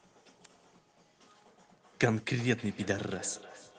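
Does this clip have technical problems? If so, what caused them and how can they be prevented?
Yes. Feedback echo between two devices, from 2.39 s onward: another device's playback re-enters this microphone, where its echo canceller cannot remove it, so the sound returns roughly every 0.3 s. Prevent it by joining the call from only one device per room, or by muting the second device's speaker and microphone.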